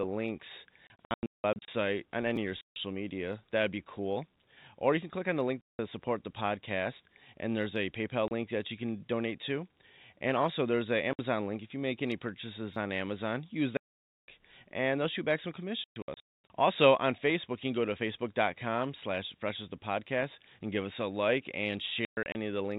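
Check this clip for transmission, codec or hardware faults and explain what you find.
Two kinds of fault turn up in this speech clip: packet loss filled with silence, and a couple of repeated buffers. The G.711 A-law telephone coding underneath sounds as expected, with everything capped at 4 kHz, so it isn't part of the problem.

Packet loss filled with silence happens at eight points: 0.87–1.68, 2.61–2.76, 5.61–5.79, 8.28–8.31, 11.13–11.19, 13.77–14.27, 15.84–16.5 and 22.05–22.35 s. Whole packets never arrived, and the receiver played dead air where they should have been. The gaps come in steps of 30 ms, which fits 30 ms packets. The holes have hard edges. At 0.87–1.68 s about 480 ms goes missing, scattered across roughly 810 ms as a choppy run. Around 13.8 s there's one solid dropout of about half a second.

The repeated buffer shows up at 2.36 s and again at 12.74–12.76 s. Both times fresh audio didn't reach the device in time, so it replayed its last 10 ms buffer: once at 2.36 s and twice at 12.74 s. 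Each repeat butts up against the next with a hard join. With a buffer that tiny, you don't hear a clear stutter. It comes across as a click or brief buzz, and a sliver of real audio is lost each time.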